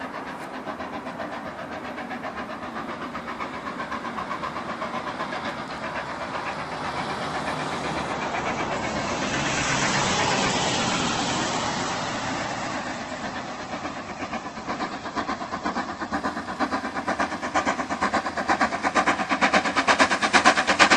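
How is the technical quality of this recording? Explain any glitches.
There's one clear glitch: between 8.13 and 16.13 s the adaptive stream drops to a lower bitrate. The connection slowed, so playback switched to a leaner encode. Everything above 8.1 kHz vanishes, the top end turns thin and swirly, and the quality snaps back with no gap.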